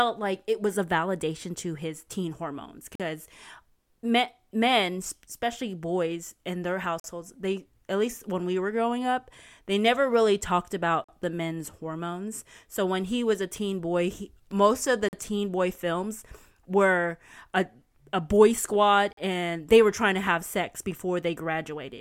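Speech delivered in 4-second chunks with a silent gap between chunks: each join leaves a 44 ms hole, at 2.95, 7.00, 11.04, 15.09 and 19.13 s. No speech is lost. It simply stops and restarts abruptly at each of these regular intervals.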